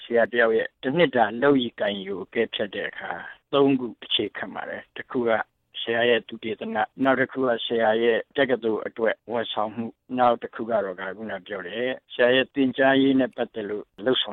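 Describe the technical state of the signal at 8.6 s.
Nothing at 8.6 s points to a technical fault; the audio is intact at that moment.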